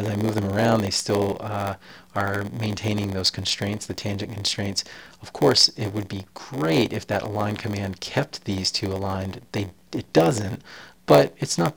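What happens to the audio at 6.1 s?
At 6.1 s, as throughout the clip, a block size mismatch (padded) leaves a short zero gap at the end of each block, which fits a 512-sample read. This causes an 86.1 Hz buzz and slows playback to 0.938 speed. Unlike a truncating mismatch, nothing is skipped, so the audio drags rather than rushes.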